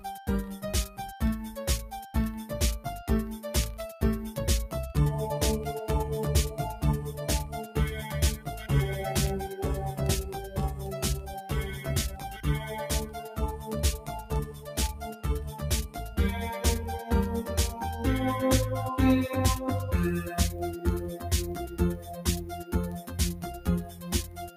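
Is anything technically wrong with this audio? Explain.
Yes. A noise suppressor built for speech was left on this material for the whole clip. It treats sustained content and tails as noise, so levels pump by roughly 10 dB.

The suppressor cuts sound hardest at 11.72–11.87 s (about 6 dB), 13.99–14.78 s (about 9 dB), 21.97–22.26 s (about 6 dB), 22.49–22.67 s, 22.97–23.18 s and 23.34–23.67 s (each about 8 dB), and from 23.83 s to the end (about 10 dB). In these spans held sound sinks and decays are clipped short.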